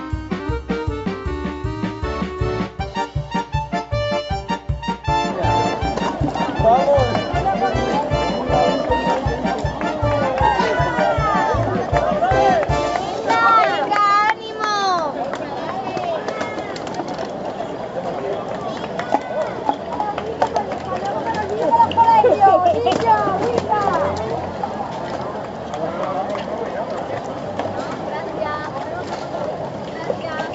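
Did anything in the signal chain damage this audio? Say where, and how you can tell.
No, nothing in the chain damaged it; the content stops at about 8 kHz and the lowest bass is trimmed, which is the normal band limit and high-pass of a wideband call path running through its microphone processing and an Opus-type codec.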